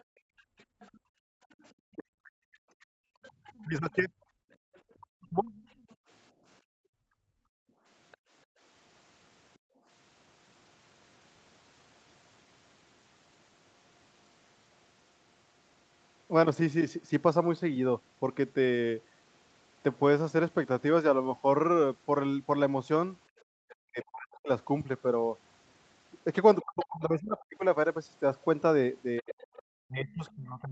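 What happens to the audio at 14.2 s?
Nothing goes wrong at 14.2 s: the speech passes through intact, with no dropout, glitch or distortion at that point.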